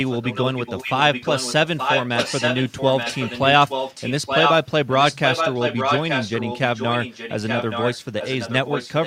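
Echo leak runs through this speech clip from 0.06 to 4.59 s, 4.91 to 6.59 s, and 6.75 s to the end. A second copy of the speech trails the original by 873 ms. It is only slightly quieter than the direct sound for the first two stretches and noticeably weaker in the last. The likely cause is a far-end loudspeaker whose echo canceller failed to remove the playback picked up by its microphone, so it was sent back into the call.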